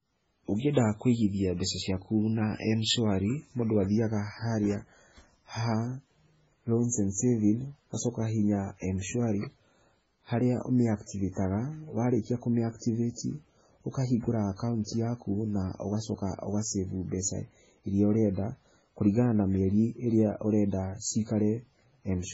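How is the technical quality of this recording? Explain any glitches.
The recording quality is poor. Heavy lossy coding affects the whole clip, and one attack is smeared.

Throughout, the speech sounds watery and swirly, with nothing above 7.7 kHz. This is likely MP3 compression at a very low bitrate, perhaps near 16 kbps, which cuts treble and drops weak frequencies.

From 11.06 to 11.09 s, a short hiss precedes a sharp onset by about 27 ms. This pre-echo occurs when codec noise spreads across the quiet moment before the attack.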